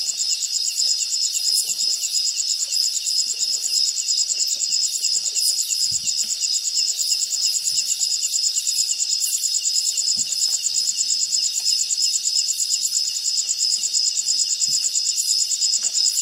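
No audible technical faults here.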